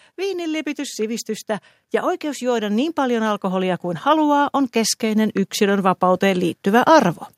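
A speech clip whose level, voice and background together, swells steadily from 0.15 to 7.16 s, about 14 dB louder: automatic gain rising, as gain control slowly boosts a quiet input.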